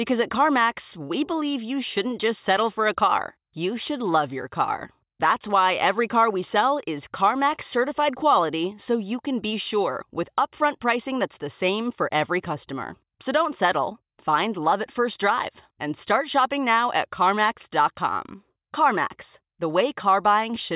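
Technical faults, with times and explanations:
No technical faults can be heard anywhere in the speech; the signal holds steady, with no interruptions, distortion or level problems.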